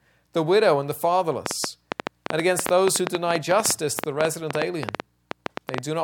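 A train of clicks runs through the audio from 1.46 s to 5.79 s: about forty similar pops at roughly 8.8 per second, irregularly spaced and peaking around 20 dB above the signal. On a waveform they appear as sharp spikes; on a spectrogram, thin broadband vertical lines. Likely cause: electrical interference or a faulty connection.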